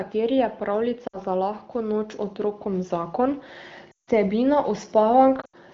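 At 1.07 to 1.18 s the sound briefly drops toward silence before recovering. These are lost AMR speech frames: about 60 ms failed their checks, roughly three 20 ms frames, and the decoder bridged the gap by repeating its last good settings at falling level.

From 1.72 to 3.46 s, voice and background swell together by about 6 dB. This is automatic gain rising: the gain control judged the input too quiet and raised it gradually.

At 3.91 to 4.10 s a longer gap of about 160 ms drops quickly to near silence, and then the voice returns weak or rough. This again points to lost frames. From 5.41 to 5.55 s, scattered losses totalling 100 ms, with the longest run 80 ms, cause a broken, wavering stretch. The AMR-WB wideband codec, running at 15.85 kbit/s, adds only light coding damage.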